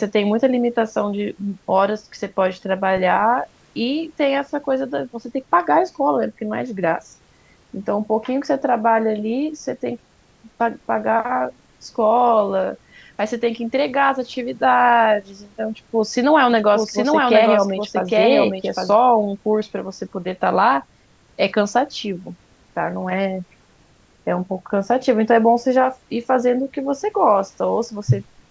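A doubled audio track appears in this speech clip from 16.5 to 18.9 s. A second full-band copy trails the original by roughly 0.7 s, a few dB quieter, with no room colour, and it cuts in and out abruptly, likely from a slower second capture path mixed back in.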